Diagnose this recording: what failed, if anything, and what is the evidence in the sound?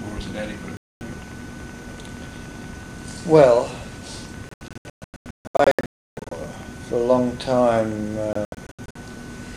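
A train of clicks runs from 0.08 to 6.64 s: regular ticks at about 10.5 per second, some seventy in all, roughly as loud as the programme. That's likely interference getting into the analogue wiring.

Digital broadcast dropout at the reception stage: the receiver mutes from 0.77 to 1.02 s, again in scattered holes from 4.49 to 6.32 s (longest 312 ms), then 8.33 to 8.96 s.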